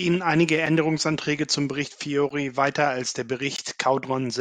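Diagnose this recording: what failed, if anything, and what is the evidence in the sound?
Three abrupt dropouts cut the speech at 0.66 s, 2.29 s and 3.56 s, each a hard-edged tick or brief hole lasting 5, 12 and 20 ms. These are blocks of digital silence at the driver or buffer stage: the output buffer wasn't filled in time, so zeros replaced the samples, cutting out and back with no fade.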